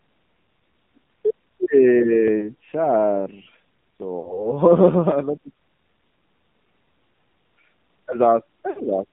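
From start to end the speech sounds thin, buzzy and synthetic, confined to roughly 150 Hz to 3.5 kHz. This is the AMR narrowband mobile codec: a vocal-tract model driven by sparse pulses, with plainly audible damage that fits a low rate around 7.4 kbps.

Lost AMR speech frames cause brief warbles and dropouts at 2.39 to 2.49 s, 4.20 to 4.53 s and 8.70 to 8.84 s. The decoder replays its last good settings with falling gain, which fits one, two, then three missing 20 ms frames.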